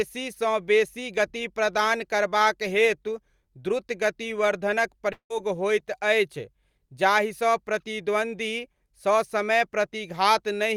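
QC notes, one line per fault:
5.12–5.31 s, long network dropout: the speech smears into a fading buzz, falls silent for 0.1 s, then resumes with 0.18 s lost, likely because packets stopped arriving.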